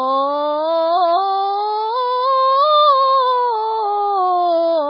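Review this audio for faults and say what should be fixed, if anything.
Heavy MP3 compression damage runs through the whole music clip, likely from a very low bitrate, around 16 kbps. Nothing survives above 5.3 kHz, so the treble is gone and the sound is dull. The encoder ran short of bits. It cut the top band at a fixed frequency. It zeroed weak frequency lines, which switch on and off between frames. That gives a watery, swirling texture and smeared attacks. To prevent it, encode from the original source at a much higher bitrate or use a lossless format.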